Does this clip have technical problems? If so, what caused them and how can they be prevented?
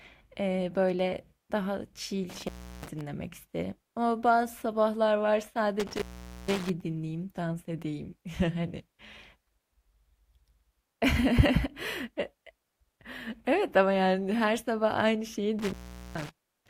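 Yes. This speech clip has an intermittent contact fault, heard three times: 2.30 to 3.01 s, 5.80 to 6.70 s, and 15.59 to 16.29 s. Each time the signal drops out for roughly 0.35, 0.46 and 0.42 s. Crackle marks the moments the connection breaks and remakes. Faint hiss remains while the line is open. A loose plug or worn cable is briefly losing contact. To prevent this, secure and strain-relieve connectors and replace damaged cables before recording.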